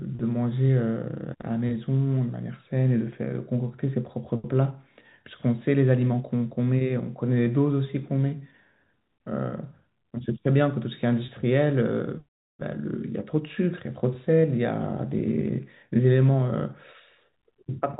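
At 11.26 s a 20 ms gap in the speech, consistent with a single lost packet, is bridged by packet loss concealment with pitch repetition: the receiver loops the last pitch period to fill the hole, so the sound briefly holds with a slight buzz before resuming. The G.711 telephone coding band-limits everything to below 4 kHz.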